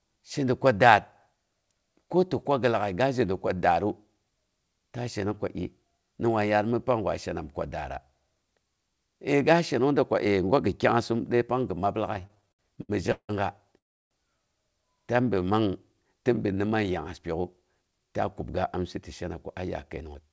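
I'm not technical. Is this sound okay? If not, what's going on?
No. The speech runs through a call connection that hits several delivery problems in the last eight seconds.

From 12.14 to 13.31 s there are repeated stalls (stutter). The sound catches and drags 14 times in just over a second, because pieces of audio kept arriving late and the receiver had to stretch the last sound each time. The longest hold is 168 ms, and about 0.43 s of filler goes in, over a third of that stretch. Unlike the freeze that follows, these are many short hiccups, not one long stop.

At 13.78 to 14.13 s comes a call audio freeze. The sound stops dead for about a third of a second, almost all of it silence, then resumes exactly where it left off with nothing lost. That single clean gap is the mark of a freeze rather than a stutter, and the likely cause is a batch of packets held up in transit, which left the receiver's buffer empty.

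From 15.25 to 15.45 s there is a jitter buffer slow-down. The receiver was short of stored audio, so it quietly repeated tiny slices of the sound, adding 40 ms. For that fifth of a second the speech plays at 84% speed and sounds drawn out. The pitch stays the same, which sets it apart from a recording simply played too slow.

Two jitter buffer speed-ups follow, at 17.34 to 18.80 s and at 19.24 to 20.30 s. This time the receiver had too much audio waiting, so it trimmed tiny pieces, around a tenth of a second or a little more each time. The speech runs at 108% speed and sounds a touch rushed. Again the pitch is unchanged, which separates it from a fast-forwarded recording.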